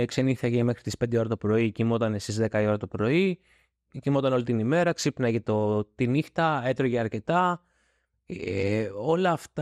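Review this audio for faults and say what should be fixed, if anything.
The speech is dull and gurgling from start to finish, with a granular roughness, which points to MP2 compression at a low bitrate, likely around 80 kbps. Layer II divides the spectrum into 32 equal sub-bands, and when bits run short it switches upper bands off and coarsely quantises the rest. On a spectrogram this appears as a hard ceiling with blocky high-frequency patches flickering in and out. Re-encode from the original source at a higher bitrate, or use a more efficient codec, to prevent it.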